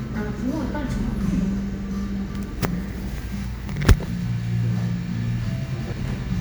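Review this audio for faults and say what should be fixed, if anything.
At 5.92 s, compressed frames are skipped: about half a second vanishes in one jump, consistent with several frames of roughly 93 ms. Check file integrity and transfer checksums before decoding so damaged or missing frames get caught early.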